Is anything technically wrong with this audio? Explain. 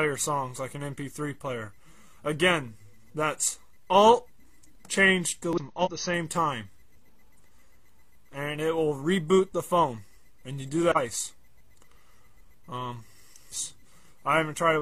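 Yes. Damaged data in a compressed stream shows up at 5.53 to 5.59 s, 5.81 to 6.05 s, 10.92 to 10.97 s and 13.47 to 13.52 s. Part of the encoded data there is wrong, so the decoder misreads or discards those frames, loses its place and hunts for the next valid frame header. Each event is a brief disruption in the audio: a chirp, squawk, click or gap. The second one, at about a quarter of a second, is the longest; the others last about 50 to 60 ms.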